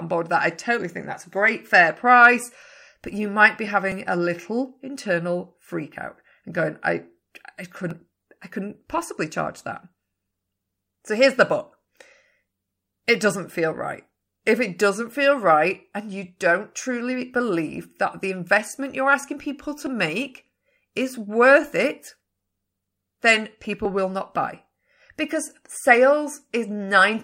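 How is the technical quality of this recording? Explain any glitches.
The speech has five brief skips, at 3.92, 7.91, 15.88, 19.87 and 23.85 s. These are audio missing between chunks: each jump cuts out about 15 ms, likely lost at the seam between 4-second processing chunks. The four-second grid they fall on is what distinguishes them from random network dropouts.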